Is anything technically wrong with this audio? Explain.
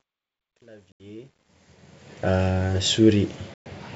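Yes. From 0.0 to 2.4 s, the fade-in on this speech suffers truncation distortion: the gain stage keeps only 10 bits without dither, so the quietest part, up to about 1.61 s, turns gritty.

Packet loss on an ADPCM call appears twice, at 0.92 to 1.02 s (80 ms lost) and at 3.54 to 3.67 s (120 ms lost). Silence filled the gaps and the decoder's predictor lost step, so each hard-edged hole is followed by slightly distorted speech before settling.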